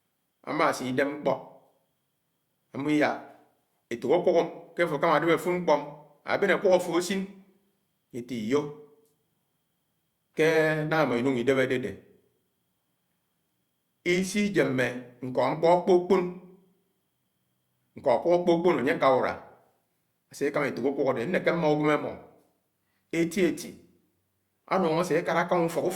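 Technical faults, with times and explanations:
Nothing stands out here; the speech runs along without any technical trouble worth flagging.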